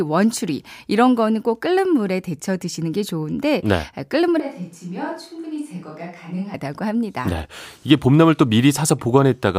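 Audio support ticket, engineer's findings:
Speech turns suddenly roomy and hollow, thinner bass, about 10 dB quieter, more background noise, 4.40–6.54 s. Likely switch to a distant microphone after close-mic signal dropped.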